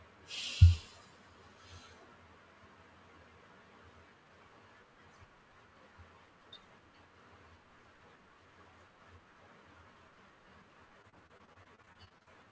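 Choppy sound runs from 11.02 to 12.28 s, riddled with rapid holes: repeated packet loss. Roughly a quarter of that stretch is missing and patched by extending the preceding sound, with gaps up to 38 ms. The sound above 8 kHz is absent, which fits a G.722 call path at 64 kbps.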